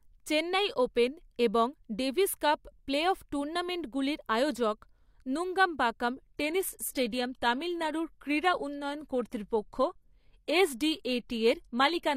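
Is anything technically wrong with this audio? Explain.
Yes. From 6.28 s to the end, an adaptive stream at a lower bitrate sets in. The treble above 14.9 kHz vanishes and artefacts rise, pointing to a switch from roughly 96 to 24 kbit/s. The change is abrupt and has no gap, unlike a dropout.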